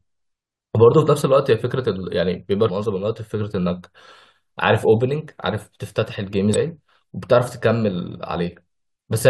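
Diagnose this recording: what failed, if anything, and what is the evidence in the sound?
Two brief glitches break into the speech, one at 2.68 s and another from 6.54 to 6.56 s. This is damaged data in a compressed stream at the codec stage: corrupted bytes made the decoder misread frames, lose sync and hunt for the next valid frame header.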